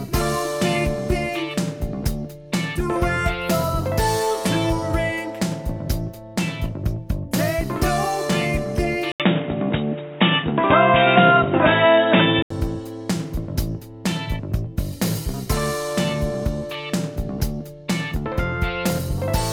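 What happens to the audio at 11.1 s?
At 11.1 s the input has switched to a poorer device, from 9.12 s to 12.50 s. After an 80 ms gap, the sound turns dull and boxy with nothing above 3.8 kHz, a few decibels different in level, over a new noise floor, most likely another microphone or headset profile.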